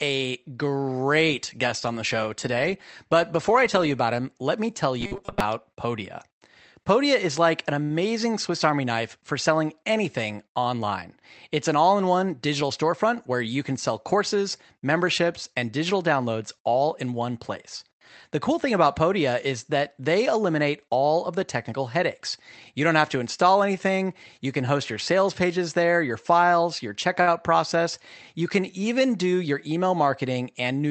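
From 5.00 to 5.40 s, robotic sound from repeated short buffers gives the speech a rigid metallic buzz at 200 Hz. The likely cause is late audio being replaced by repeats of the last 5 ms while about half the real signal is skipped. On a spectrogram this shows as evenly spaced horizontal harmonic lines.

At 7.83 to 7.99 s, a short stall from a late packet holds one sound for 67 ms, and nothing is lost. The waveform shows a flat, repetitive stretch. The same fault returns at 27.21 to 27.29 s with 56 ms of filled sound.

A jitter buffer speed-up runs from 12.15 to 13.04 s at 107% speed and again from 29.25 to 29.77 s at 110%. Each time, the receiver cut out around 70 ms of pitch periods to reduce the delay, so the speech sounds hurried at the same pitch. On a waveform this appears as slightly compressed syllable spacing.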